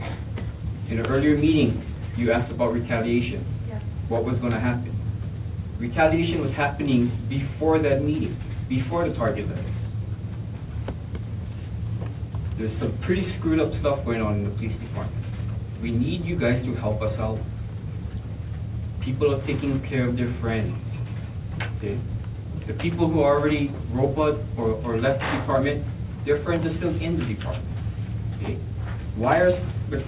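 No technical faults occur at any point in the clip, which comes through a G.711 A-law call path at 64 kbps with nothing above 4 kHz.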